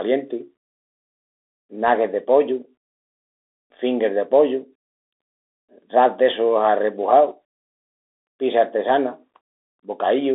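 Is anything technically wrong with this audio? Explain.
Yes. Throughout, the speech carries Bluetooth CVSD headset codec damage. One-bit delta coding with an adaptive step makes the sibilants gritty and leaves a granular hiss. The spectrogram shows a 300 Hz to 3.6 kHz band, blank above 3.8 kHz.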